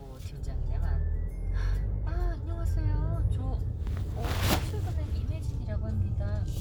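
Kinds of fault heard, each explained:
No technical faults detected; nothing to report.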